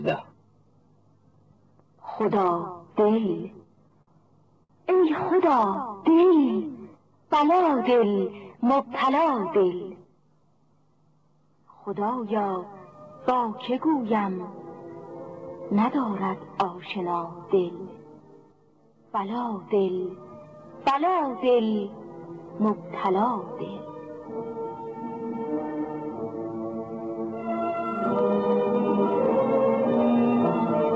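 From 3.02 to 5.90 s the audio shows repeated stalls (stutter): fourteen brief holds where the jitter buffer ran dry and the receiver stretched the last sound, 227 ms in all, the longest 63 ms. Nothing is lost. Unlike the smooth slow-down that follows, these are separate hitches that halt the flow.

Overlapping this, from 5.46 to 6.54 s, a jitter buffer slow-down adds 86 ms by repeating single pitch periods to rebuild the reserve. Playback drops to 93% speed with pitch unchanged, so sounds drag evenly rather than catching.

From 8.49 to 10.13 s comes a jitter buffer speed-up. An overfull buffer was trimmed by cutting short pitch-period pieces, around 150 ms in total, pushing playback to 108% speed. The pitch stays put, which separates this hurried stretch from a simple rate change. All of this sits on a call path with nothing above 8 kHz, which fits a wideband codec like G.722.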